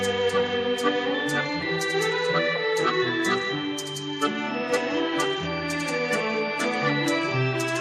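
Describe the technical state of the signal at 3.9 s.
At 3.9 s the signal is intact, with no audible dropout, distortion, glitch or other technical fault at that point.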